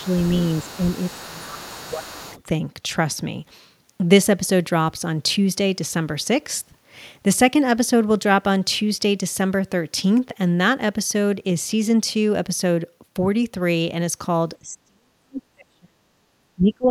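From the very start to 2.43 s, a second talker's voice sits faintly under the speech, about 20 dB below it. This is the other side's voice leaking through, likely because the echo canceller left residual loudspeaker echo in the microphone signal. Unlike crosstalk from a nearby person, this voice comes from the loudspeaker and not from the room.

During that overlap the speech dips. A brief drop of about 10 dB comes in the first 0.07 s, then from 1.25 to 2.34 s the level sinks by about 15 dB. This is speech suppressed in double talk, likely the canceller turning down everything while both sides spoke at once. Later the dips grow deeper, with a near cut-out from 14.62 to 16.08 s, a short hole at 16.3 s and a drop of about 30 dB from 16.55 s to the end. Unlike a network dropout, the speech is turned down, not lost to missing data.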